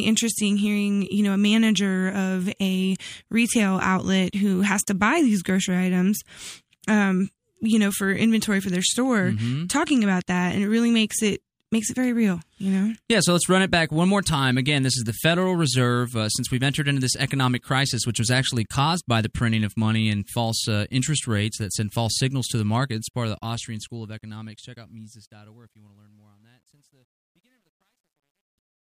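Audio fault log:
22.97–28.85 s, truncation distortion on a fade: as speech fades out from about 23 s, the undithered gain stage, consistent with roughly 11-bit resolution, steps the waveform coarsely; it turns gritty from 25.28 s.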